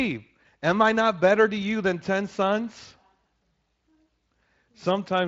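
Nothing goes wrong anywhere in this speech, which carries the light texture of a Speex codec at about 23.8 kbps, with nothing above roughly 7.7 kHz.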